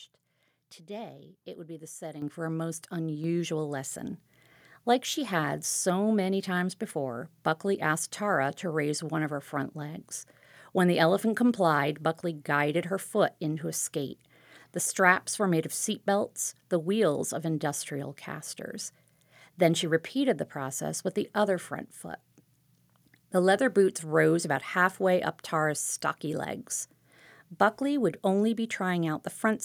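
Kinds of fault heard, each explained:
Microphone volume stepped up: the input level jumps twice, about 8 dB at 2.22 s and about 4 dB at 3.24 s. Voice and background rise together instantly, unlike a talker moving closer.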